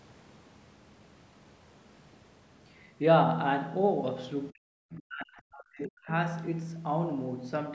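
From 4.51 to 6.1 s the speech is pulled down, adding up to around a second and a half of suppression, with the deepest dips roughly 40 dB below the surrounding level. This is most likely speech suppressed in double talk: with both ends talking at once, the call's echo canceller could not tell the local talker from loudspeaker echo and attenuated both. The band-limiting of the call microphone processing, with nothing above 8 kHz, is present throughout.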